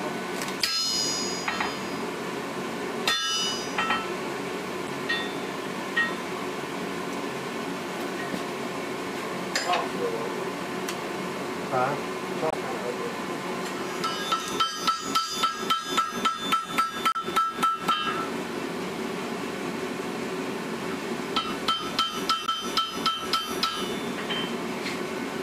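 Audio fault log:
0.59–0.63, 4.85–4.89, 12.48–12.54, 17.12–17.16 and 22.45–22.49 s: damaged data in a compressed stream. Each is a 40–70 ms glitch as the decoder misreads corrupt frames and resyncs.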